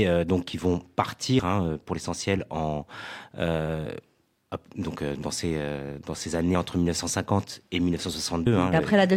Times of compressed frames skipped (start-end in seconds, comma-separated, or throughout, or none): 8.46